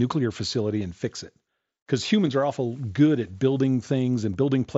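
At 0.81 s, 2.27 s and 4.33 s the audio has brief concealed Bluetooth headset packet loss, gaps of about 15 ms, 7.5 ms and 15 ms that suggest two, one and two lost packets. The receiver filled each gap by repeating a matching recent stretch of waveform, so these are short concealed patches rather than silent dropouts or clicks, with the single loss at 2.27 s nearly hidden. Around them the wideband mSBC headset codec keeps speech up to 8 kHz with light graininess.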